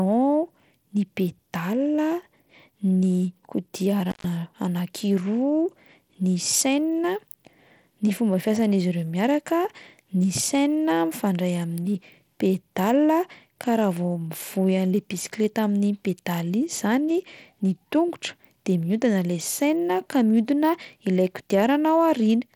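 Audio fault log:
throughout: Bluetooth SBC compression. The speech carries plainly audible codec damage: gritty quantisation noise and aliasing on the upper frequencies, with treble that flickers rather than holding steady. The spectrum still extends to about 20.9 kHz, so this is coarse quantisation of the upper bands rather than a clean lowpass. The likely cause is SBC's fixed sub-band split with crude bit allocation. The amount of damage fits a low bit pool, at a bitrate of around 96 kbps, which starves the weaker top bands.
4.10–4.24 s: intermittent contact. The audio drops out for about 126 ms, just before "anankiroa ny chaîne", with a crackle at each edge and faint hiss while the signal is gone. That pattern points to a loose plug or cable whose connection opened briefly. The signal path broke and then re-made, and the abrupt make and break at each end produced the clicks.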